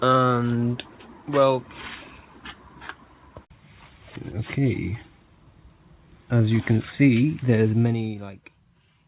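At 4.16 s a stretch of about a second of audio was dropped while later material was already queued, so the receiver jumped straight ahead. This is a skip ahead: nothing fills the hole, and the sound on either side of the cut is spliced almost directly, producing an abrupt discontinuity where part of the flow simply vanishes. The end-to-end delay shrinks by roughly a second at that point.

Twice afterwards the jitter buffer held more audio than its target and trimmed it down by cutting out short pitch-period-sized pieces in quick succession. This is jitter buffer speed-up. From 4.38 to 4.95 s playback runs at 106% speed, shedding around 50 ms. From 6.32 to 8.61 s it runs at 109%, shedding about 200 ms. The pitch stays put, but these passages sound noticeably hurried and the timing feels compressed. Throughout, the G.711 A-law call path limits the band to 4 kHz.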